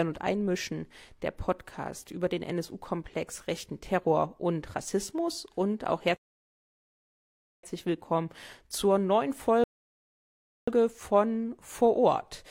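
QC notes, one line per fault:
6.17–7.63 s and 9.64–10.68 s, rebuffering stall: playback freezes into silence after "und auch" and again after "willkommen zur neuen", then resumes exactly where it stopped. The player starved of downloaded data, adding about 1.47 s and 1.04 s. Unlike a dropout, no audio is skipped.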